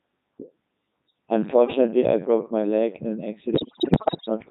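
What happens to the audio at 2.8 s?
At 2.8 s the speech is still under the Codec 2 vocoder, which runs through the whole clip. It runs at 3.2 kbit/s with heavy damage. Only pitch, voicing, energy and spectral envelope survive, resynthesised as sine waves, so it sounds buzzy and robotic. A spectrogram shows rigid, evenly spaced harmonics, and the waveform no longer matches the original.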